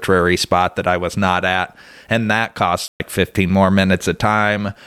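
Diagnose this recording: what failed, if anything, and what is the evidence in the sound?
A playback stall at the playback stage: just after "at and that cost", the speech halts for 120 ms, from 2.88 to 3.00 s, then resumes. The waveform shows a flat gap and the spectrogram a blank vertical band, likely from the player running short of data.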